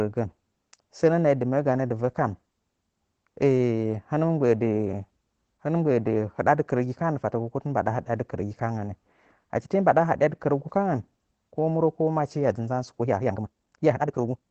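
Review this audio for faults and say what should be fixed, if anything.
Opus voice compression runs throughout. The sound is muffled, hoarse and slightly robotic, with nothing above about 8 kHz. That fits the linear-prediction voice coder working at a low bitrate around 12 kbps, which narrows the band and codes the excitation coarsely. To prevent it, encode at a higher bitrate or keep an uncompressed master for the final render.

A time-stretched section runs from 12.97 s to the end. The pace jumps abruptly to about 1.94 times as fast while the pitch holds steady, so this stretch sounds rushed. The likely cause is software squeezing the audio to fit a length by dropping short pieces. To prevent it, trim or re-edit the material to length instead of compressing it in time.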